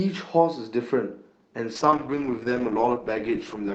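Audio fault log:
1.76–3.75 s, call bitrate drop: the speech turns rough and watery with duller highs, worst for about 1.24 s, against the cleaner Opus call sound before it. This fits the encoder being pushed from around 64 kbps to about 10 kbps, coding more coarsely.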